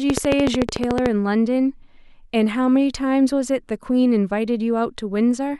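From 0.10 s to 1.07 s a train of clicks runs over the speech: around fifteen sharp, near-identical pops at a steady 13.5 per second, standing well above the speech level. It sounds like rapid ticking laid over the sound, likely from electrical interference or a faulty connection or power supply. On a spectrogram it shows as evenly spaced thin vertical lines spanning the frequency range; the waveform shows a regular row of narrow spikes.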